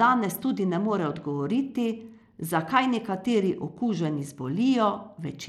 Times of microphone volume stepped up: none

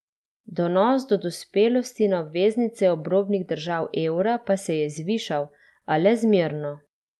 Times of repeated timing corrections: 0.18-7.10

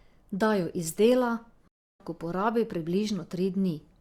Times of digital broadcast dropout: 1.68-2.00

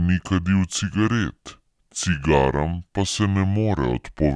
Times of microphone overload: none

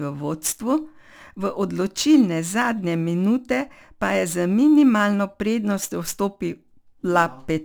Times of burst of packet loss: none

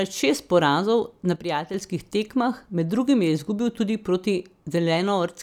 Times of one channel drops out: 1.36-1.74

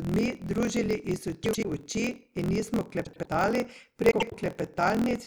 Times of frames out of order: 1.43-1.65, 3.04-3.27, 4.11-4.34

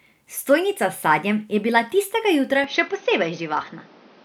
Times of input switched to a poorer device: 2.64-4.24

